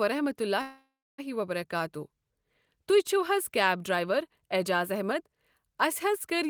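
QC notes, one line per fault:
0.61–1.20 s, call audio freeze: the speech smears into a fading buzz, then about 0.3 s of silence, resuming exactly where it stopped, 0.57 s late. That points to a likely jitter-buffer underrun, not a dropout.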